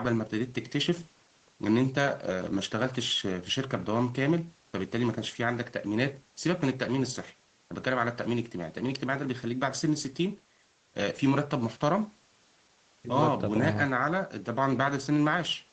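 No technical fault can be heard in the speech: its content stops at about 8 kHz, consistent with a wideband call path through the Opus codec at a rate that fits roughly 20 kbps, with the microphone processing's usual trimming of the lowest bass.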